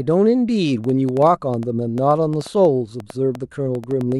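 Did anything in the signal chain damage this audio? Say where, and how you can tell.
Yes. From 0.84 s to 4.13 s the speech carries a train of clicks: about 6.4 per second, unevenly spaced, roughly twenty in all, each with much the same sharp shape and peaking around 5 dB above the speech. They tick through the pauses as well as the talking, so they were added to the signal rather than arising from it. The cause is likely electrical interference coupling into the analogue wiring, or a struggling interface injecting repeated pulses.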